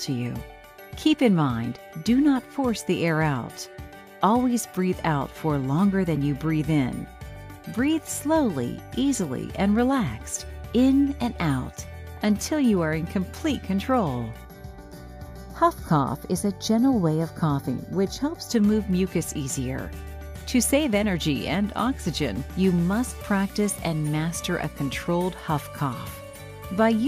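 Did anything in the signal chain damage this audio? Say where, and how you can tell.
Yes, there's channel delay (comb filtering) from 14.45 to 18.51 s. It turns hollow and phasey with fixed notches, the first around 3 kHz. That fits one channel arriving roughly a fifth of a millisecond late before the stereo-to-mono fold-down, cancelling evenly spaced frequencies.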